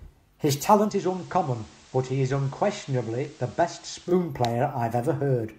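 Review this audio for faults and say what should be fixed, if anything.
At 0.83 s the speech shows digital radio blending to analogue: the receiver lost its digital stream and cross-faded over about 105 ms to the station's FM broadcast, returning to digital at 4.15 s. During that stretch the level drops by about 4 dB, and hiss appears roughly 25 dB below the speech. Unlike a codec bandwidth cut, the change arrives together with hiss and a level step through short cross-fades at each end. Prevent it by recording from a stronger digital signal, or by disabling the receiver's analogue blend and capturing the digital stream directly.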